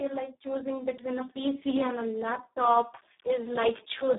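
Speex codec damage throughout: a starved low-bitrate CELP excitation, sounding near 4 kbps, leaves the speech hoarse and robotic within a 150 Hz to 3.7 kHz band.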